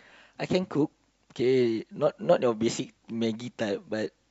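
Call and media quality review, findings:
No audible faults found in the speech; nothing to flag for any component.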